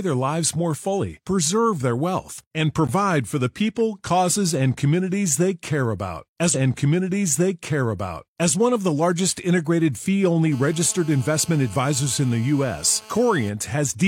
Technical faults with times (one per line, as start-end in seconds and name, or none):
6.50-8.51 stream segment repeated
10.52-13.49 GSM phone buzz